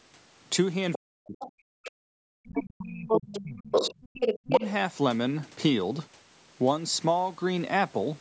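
Speech recorded through a call's microphone processing, with nothing above 8 kHz, carries two related faults. The other side's voice leaking through appears at 0.93–0.99 s, 1.40–1.48 s, 2.55–2.72 s, 3.08–3.43 s and 3.72–4.66 s. The first three scraps sit roughly 10 to 15 dB under the talker, while the last two reach about the same level as the talker. This is likely residual loudspeaker echo that the echo canceller failed to subtract from the microphone signal. Speech suppressed in double talk overlaps these intervals at 0.97–1.92 s, 2.32–3.95 s and 4.47–4.63 s. The talker's level falls by as much as about 40 dB in the first two spans, which together cover roughly two and a half seconds, and by about 20 dB in the brief third one. The likely cause is the canceller attenuating the whole signal when it could not separate near-end speech from the simultaneous echo.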